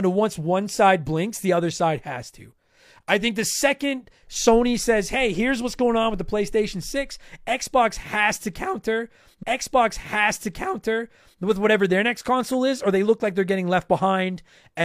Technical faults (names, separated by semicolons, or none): stream segment repeated